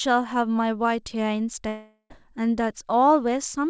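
From 1.68 to 2.12 s comes a likely long network dropout. The last sound fades as a buzz, goes briefly silent, then speech returns minus the lost part.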